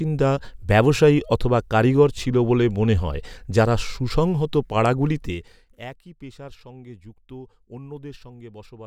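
A speech clip with zipper noise from 5.16 to 5.77 s. The level falls by about 20 dB in 2 dB steps, around twenty a second, with no smoothing. Each jump clicks, so a fast ticking rides on the speech while the level drops.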